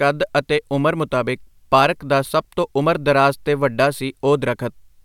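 No technical faults are audible anywhere in the speech recording.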